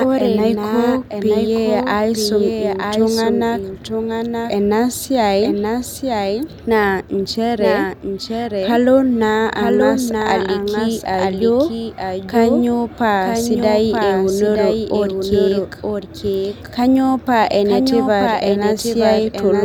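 From start to finish, the speech carries a doubled audio track: a second, full-band copy trails the original by about one second, sitting roughly 5 dB lower. It is a clean repeat with no decay or room colouring, so it reads as a distinct second layer rather than reverb. The likely cause is the signal being captured twice, once through a slower path, with both feeds summed into the same mix.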